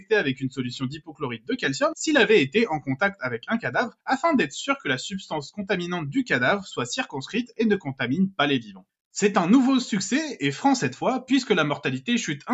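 From start to finish, a noise suppressor built for speech is applied to sounds it was not designed for. It treats steady, sustained material and ambient tails as noise, so the level swings by around 10 dB as it decides moment to moment what to keep. Attacks get through while held portions sink, which gives a pumping, unsteady quality. Unlike a compressor, this tracks how noise-like the sound is rather than how loud it is.

Between 0.95 and 1.49 s, the suppressor cuts a stretch of sound harder than the rest, dipping by up to about 20 dB over roughly 0.4 s in total. Again between 8.62 and 8.86 s, it pulls another passage down by up to about 19 dB for roughly 0.2 s. These are not dropouts: the sound thins and sinks rather than vanishing, and its transients still poke through. The band-limiting from the call microphone processing, with nothing above 8 kHz, is separate from these dips.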